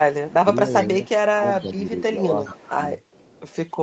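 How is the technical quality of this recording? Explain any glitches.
The recording has two related call-path problems: echo leaking back into the speech, and the speech itself being pulled down while both sides were active. Its content stops at about 8 kHz, consistent with the Opus call path.

Echo leak occurs at 0.27–0.34 s, 0.79–0.86 s, 1.54–2.01 s, 2.48–2.71 s and 3.12–3.52 s. A loudspeaker echo canceller likely failed to remove all of the far-end sound, sending back a copy delayed by 416 ms. It is heard as faint trailing scraps, roughly 20 to 35 dB below the speech.

Speech suppressed in double talk spans 0.43–2.86 s. With both sides talking, the echo canceller likely could not separate the local talker from the loudspeaker echo and attenuated both. The speech dips by up to about 10 dB, for around a second in total, in uneven patches.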